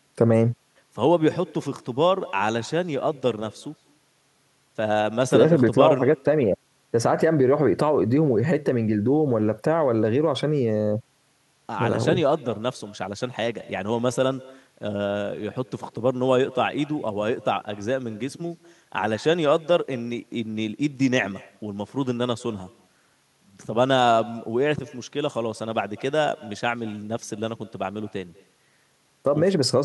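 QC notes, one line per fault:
throughout, echo with no canceller: everything said comes back around a fifth of a second later as a faint, thin copy, about 23 dB down. The far end's loudspeaker is feeding its microphone, and nothing strips that return before it travels back.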